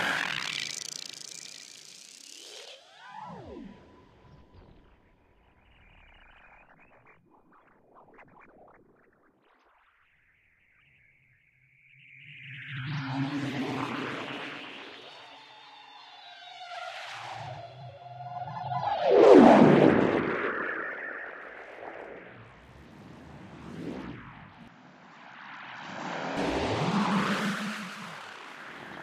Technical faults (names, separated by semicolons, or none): input switched to a poorer device